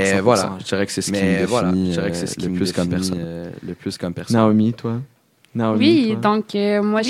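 A speech recording with a doubled audio track throughout: a second full-band copy runs about one and a half seconds behind, roughly 5 dB quieter. Unlike an echo, it has no decay or room colour. It is likely a second capture through a slower path.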